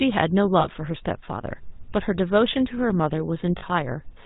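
From the start, the speech carries the buzzy, gravelly roughness of the GSM full-rate codec, which fits a 13 kbps coder. A vocal-tract model is driven by coarse pulse excitation, and everything above 4 kHz is gone. Plain band-limiting would sound muffled but smooth, not rasping like this.

At 0.60 s and again at 3.58 s, lost GSM frames cover about 40 ms each. The decoder repeats the last good frame's settings, so instead of a silent gap there is a brief, rough metallic ring.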